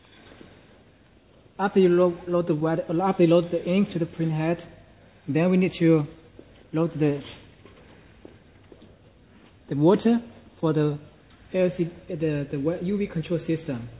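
No technical faults can be heard anywhere in the recording, and the signal holds steady throughout without any break, glitch or level disturbance.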